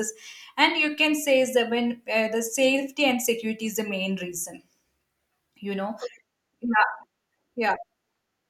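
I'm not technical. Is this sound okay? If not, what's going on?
Yes, nothing in this speech recording points to a technical problem. There is nothing here that needs fixing.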